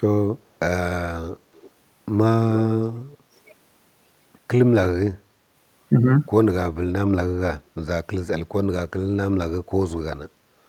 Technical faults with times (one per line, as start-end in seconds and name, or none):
1.57-1.70 echo leak
2.55-2.62 echo leak